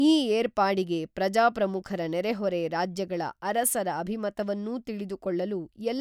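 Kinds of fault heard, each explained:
No kinds of fault are heard in this speech.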